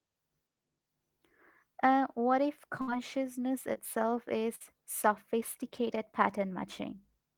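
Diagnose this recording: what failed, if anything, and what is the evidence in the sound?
The network dropped a burst of packets twice: at 2.81 to 2.89 s, right after "what if", and again at 4.55 to 4.73 s. Each time the receiver stretched the last sound out, fading it for about 50 to 60 ms, then picked up later with a chunk missing.

There's also a short concealed packet loss on the network side at 3.73 to 3.77 s. Roughly 20 ms never arrived in time. The decoder papered over it by carrying the previous sound forward and blending back in, which leaves a quick smear.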